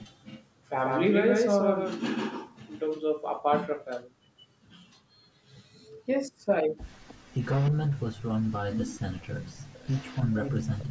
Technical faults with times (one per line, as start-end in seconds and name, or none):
0.25-0.44 echo leak
7.08-7.71 echo leak
8.70-10.28 echo leak
10.26-10.90 speech suppressed in double talk